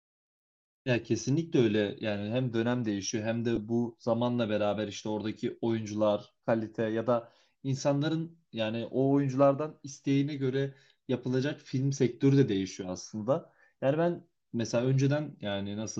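At 3.56 s the speech briefly turns into a noisy smear, a tiny rough blip rather than a gap. These are lost LE Audio frames: about 10 ms went missing, which fits one lost frame, and the LC3 decoder filled the hole by repeating the previous spectrum with randomised signs.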